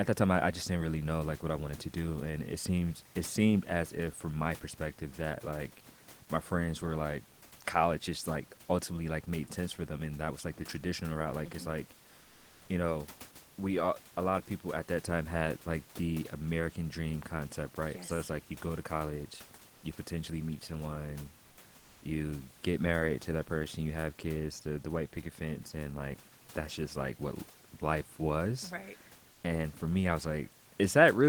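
At 12.21–12.69 s after "it's like", and at 21.49–21.57 s and 21.79–22.01 s after "you potentially meet someone", the room noise becomes comfort noise in place of the background, likely from Opus discontinuous transmission. Each gap is filled with a flat, featureless hiss, about 2 dB quieter in the second gap. A spectrogram shows the textured noise floor turning into smooth, uniform shading, and the waveform flattens into an even band.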